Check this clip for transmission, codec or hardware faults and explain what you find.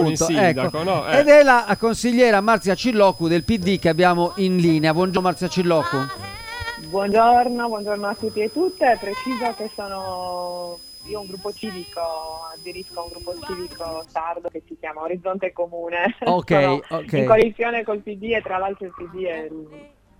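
Two faults are present: a switching supply whistle and damaged data in a compressed stream.

From the start to 14.05 s, a switching supply whistle sits under the sound. A power supply's switching frequency has fallen into the audible range. The result is a thin, steady whistle at about 5 kHz, wandering between 4.99 and 5.07 kHz, roughly 20 dB below the signal.

Damaged data in a compressed stream causes brief blips at 5.17, 7.12, 11.63, 14.48 and 17.41 s. Corrupted bytes make the decoder misread frames and lose sync. Each event is a short chirp, squawk, click or hole.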